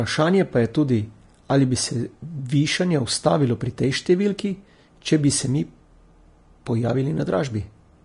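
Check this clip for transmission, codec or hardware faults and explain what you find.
There's one codec problem, present from start to finish. Throughout the speech there's a hissy, grainy top end with roughened tones and smeared consonant attacks. That's likely Vorbis compression at a low bitrate, around 33 kbps, where the treble gets quantised so coarsely it turns into noise.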